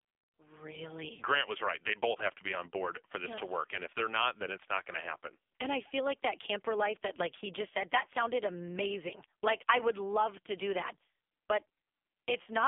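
From start to finish the speech carries AMR narrowband mobile codec damage, and it is heavy. Nothing survives above about 3.6 kHz, and the low end thins below roughly 250 Hz, so the voice sounds boxed in and telephone-like. The codec rebuilds each short frame from a vocal-tract model and a few pulses, which leaves a buzzy, synthetic edge consistent with a low rate near 5.9 kbps. On a spectrogram, energy stops at a hard ceiling with blurred harmonics beneath it.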